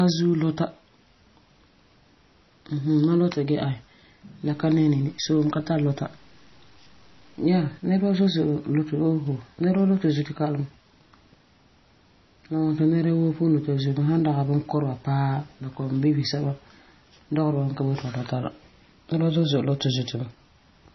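Throughout the speech, nothing is heard above 6 kHz, and the sound is watery and swirly, with heavy codec damage: smeared attacks and chirpy sibilants. This is likely MP3 compression, fitting a very low bitrate near 24 kbps. Unlike plain low-pass filtering, the weak frequency lines flicker on and off from frame to frame.

From 4.51 to 7.77 s, a grainy distortion appears that follows the speech and sits about 35 dB below it. It fits likely low bit depth without dither, consistent with 8-bit truncation. Unlike steady background hiss, the noise rises and falls with the signal.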